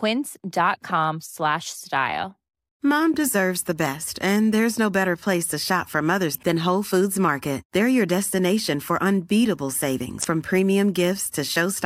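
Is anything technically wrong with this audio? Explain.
Yes. Damaged data in a compressed stream occurs twice in this speech, at 6.31–6.36 s just after "shop for" and at 10.20–10.25 s after "your destination for unbeatable". Corrupted bytes make the decoder misread frames and resynchronise, producing a brief chirp, squawk, click or short hole, visible as short broadband smears or abrupt waveform discontinuities.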